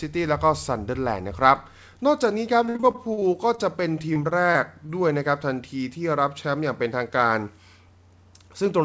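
From 2.66 to 3.60 s the speech turns choppy and robotic across ten brief holes (longest 51 ms), a quarter of that stretch patched over. A milder bout, four gaps, follows at 4.14 to 4.91 s. This is repeated packet loss, each missing packet filled by stretching the preceding sound.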